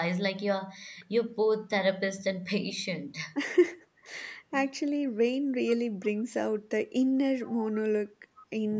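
Speech that turns thin, bright and hissy from 5.34 s to the end: pre-emphasis left on, a CD-style 50/15 µs treble boost lifting 10 kHz about 8 dB over 1 kHz without the matching cut. From 7.45 to 7.70 s a faint delayed copy of the speech, roughly 20 dB down and trailing by 446 ms, is likely an echo leak from a far-end loudspeaker that the echo canceller did not fully remove. The band stops at 8 kHz, as the call's microphone processing sets it.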